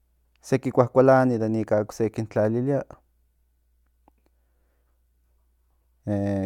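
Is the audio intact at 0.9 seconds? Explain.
Yes, the speech at 0.9 seconds plays through intact, with no dropout, click, distortion or other fault at that moment.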